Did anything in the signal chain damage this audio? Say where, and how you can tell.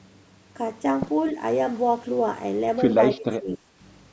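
Yes, at the call-processing stage. From 3.13 to 3.69 s the speech sinks by as much as about 25 dB and breaks up for a few hundred milliseconds. That's speech suppressed in double talk, likely the echo canceller mistaking overlapping near-end speech for loudspeaker echo and ducking everything.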